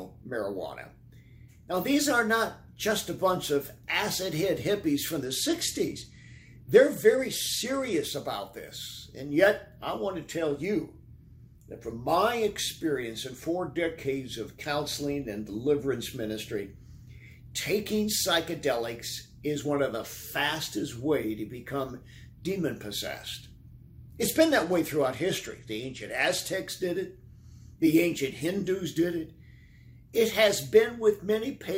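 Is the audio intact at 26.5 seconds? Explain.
No. A Bluetooth SBC bit pool drop runs from 24.21 to 26.55 s; the link throttled the codec, which fits a fall from bit pool 28 to 13, so treble dulls and gritty noise rises.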